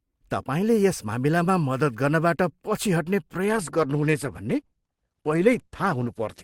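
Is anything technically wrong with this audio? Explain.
Yes. From 3.44 s, after "गर्नबाट पछि हट्ने", adaptive stream at a lower bitrate: the player switches abruptly, without a gap, to a lower-quality rendition that fits dropping from roughly 64 to 16 kbit/s Opus. Treble vanishes above 12.1 kHz and codec artefacts increase until the end.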